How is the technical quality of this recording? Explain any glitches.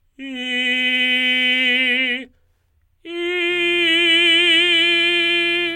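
A steady, raspy buzz enters the music at 3.47 s and continues to the end of the clip at 5.76 s. This is mains buzz on a 60 Hz supply, sitting well below the music. A dimmer, rectifier or poorly shielded cable injects sharp switching spikes twice per mains cycle, so the interference contains many harmonics of 60 Hz reaching into the kilohertz range. That dense harmonic stack is what gives it a gritty buzz rather than a smooth hum.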